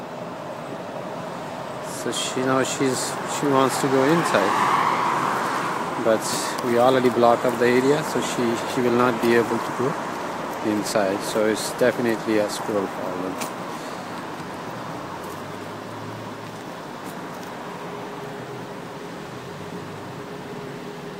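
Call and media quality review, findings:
Nothing stood out on listening; no fault to report in this clip.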